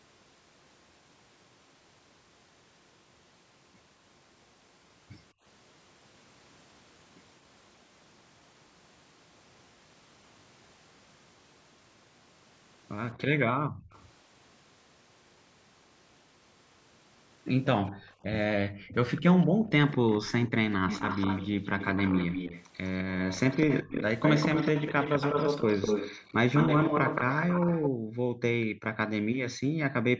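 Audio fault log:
5.33–5.44 s, 13.51–13.91 s, 17.92–19.7 s, 27.9–30.08 s, background gated by the echo canceller: the canceller clamped the microphone while far-end audio played, so room sound dips away by about 27, 30, 32 and 40 dB, briefly at first, then in broken stretches totalling roughly a second near the end.
13.12–13.99 s, 17.86–28.65 s, echo leak: a far-end loudspeaker's echo canceller likely failed to remove what its microphone caught, returning a copy of the sound 205 ms late. It is faint at first, about 35 dB down, then nearly as loud as the speech, about 5 dB below it.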